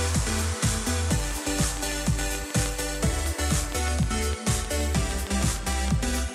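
From about 1.31 s right through to 6.2 s there's a train of clicks, a steady tick at about 6.6 per second, roughly thirty in all, poking around 10 dB above the sound. They're evenly spaced and alike, likely interference or a faulty connection or power supply.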